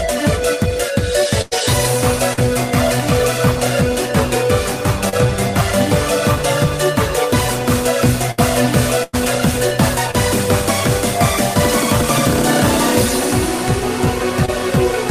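Right at 1.41 to 1.53 s there's a burst of packet loss: about 100 ms of audio never arrived, so the receiver kept extending the last sound and fading it, which gives a held, dimming tail before the audio picks up further along with that stretch gone. Then at 2.33 to 2.39 s comes a short concealed packet loss, roughly 40 ms missing and patched by continuing the prior sound and blending back in, heard as a quick smear.

Another short concealed loss sits at 5.09 to 5.28 s, again about 40 ms lost, and the patch runs a few milliseconds long, so there's a slight stretch in the timing. Two more bursts follow close together: 8.31 to 8.40 s, where about 60 ms went missing, and 9.04 to 9.15 s, about 100 ms, both with the same fading fill and a jump forward afterwards.

The last two are small concealed losses of about 20 ms each, at 10.11 to 10.15 s and 14.45 to 14.50 s. They're just brief smears or wobbles where the receiver papered over the hole.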